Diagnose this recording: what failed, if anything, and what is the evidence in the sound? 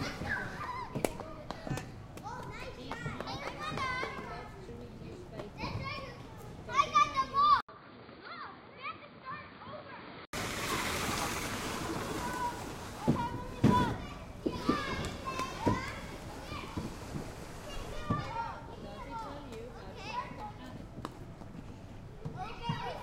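At 7.61 s the audio drops out for about 80 ms and then returns dull and boxy, with nothing above 4.7 kHz, about 10 dB quieter, and carrying new background noise roughly 40 dB below the signal. At 10.33 s the full bandwidth returns. This points to the driver or device stage: the system likely switched input to a poorer device, such as another microphone or a headset's call profile, whose narrower band, lower level and own noise floor replaced the original input until the switch back.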